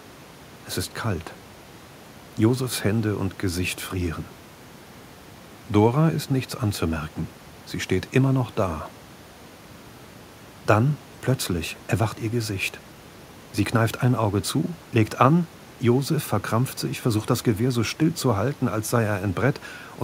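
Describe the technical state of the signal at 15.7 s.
At 15.7 s the signal is intact, with only the room's own background noise sitting about 26 dB below the speech.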